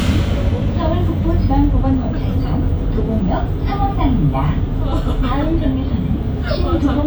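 Listening through the recording of everyday sounds, nothing stood out as a technical problem at any point.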